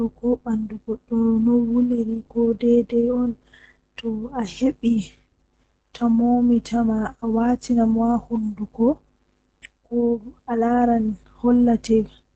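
From the first second to the end, the speech carries Opus voice compression running in its SILK linear-prediction mode. Nothing survives above about 8 kHz, so the top end is dull and muffled, and the coarse coding of the excitation leaves a hoarse, slightly robotic edge that's easy to hear on every phrase. The damage points to a low bitrate, something around 12 kbps, coded in 20 ms frames.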